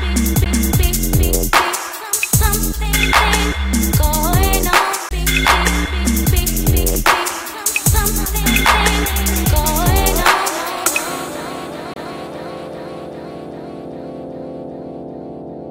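Three CD skips here. The first hits at 0.44 s, the second runs from 5.09 to 5.11 s, and the last from 11.94 to 11.96 s. Each time the laser lost its track and landed on another turn of the spiral, so the player mutes very briefly, roughly 15 to 30 ms, and picks up from a different spot. You hear a little tick and then the sound lurching to a different place.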